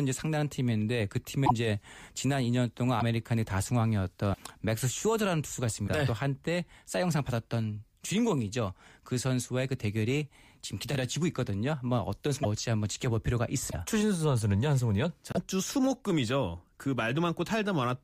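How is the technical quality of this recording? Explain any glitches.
The speech has seven brief glitches, at 1.45, 2.99, 4.33, 5.87, 12.42, 13.70 and 15.32 s. Each spans 24 to 58 ms, roughly one or two 26.1 ms frames. The audio skips ahead with a short chirp or burst of noise. The likely cause is a broken MP3 bit reservoir. After frames went missing, the next frame read its borrowed bits from the wrong frame.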